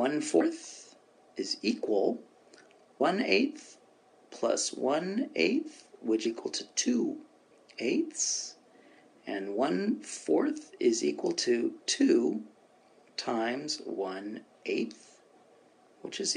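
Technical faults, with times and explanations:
0.40 s, 3.00 s and 6.25 s: damaged data in a compressed stream. Corrupted bytes make the decoder misread frames and lose sync, so each spot gives a brief chirp or blip.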